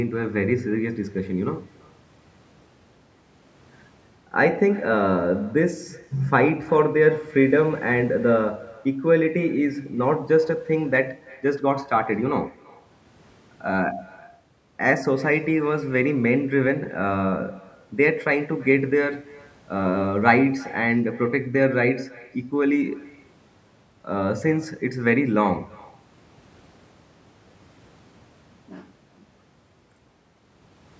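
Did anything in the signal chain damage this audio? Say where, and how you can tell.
Yes. The damage is an echo with no canceller, at the far end of the call, where the other side's loudspeaker feeds their microphone and nothing removes it. Throughout the speech, each phrase is followed roughly a third of a second later by a faint copy, about 25 dB down. That copy is our own speech returning over the network round trip. It sounds thinner because it has travelled through a loudspeaker and a room, within the call's band that stops at 8 kHz.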